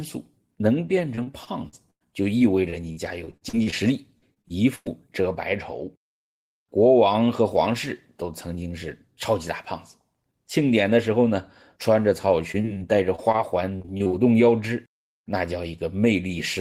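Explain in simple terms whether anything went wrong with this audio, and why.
Between 1.15 and 4.88 s, and again from 12.52 to 14.12 s, the speech turns choppy and robotic, with bits missing. That is repeated packet loss (robotic sound): pieces of audio kept going missing, and each hole, up to 100 ms, was filled by stretching the previous sound.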